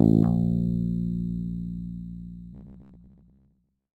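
From 2.53 s to 3.99 s the sound turns into a rigid, metallic buzz pitched at 66.7 Hz, the robotic sound from repeated short buffers. The likely cause is audio arriving too slowly, so a segment of about 15 ms keeps being replayed while fresh material is skipped, with roughly half of what is heard being repeats. Unlike a mains hum, the buzz is imposed on the sound itself and still loosely follows its contour rather than sitting steadily underneath.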